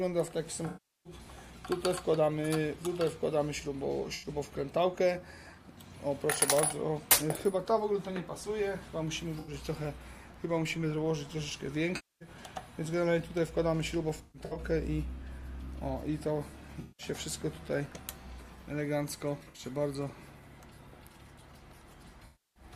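Smeared, noisy patches appear at 0.67–1.13, 4.14–4.29, 9.39–9.53, 11.95–12.29, 14.17–14.59, 16.81–17.06, 19.37–19.63 and 22.26–22.63 s. This is AAC frame loss with concealment, where the decoder filled the gaps from the last good spectrum.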